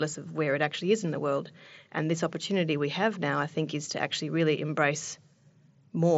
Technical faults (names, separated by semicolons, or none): none